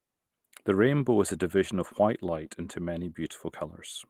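Speech runs through the whole clip with channel delay (comb filtering): one channel lags the other by a tiny amount, roughly a tenth of a millisecond, which fits a few samples. Summed to mono, the shared signal cancels near 5 kHz, with the next notch near 15 kHz, leaving the voice hollow and slightly dulled in its upper presence. On a spectrogram this shows as a steady dark horizontal band around 5 kHz from start to finish, alongside faint Opus coding traces.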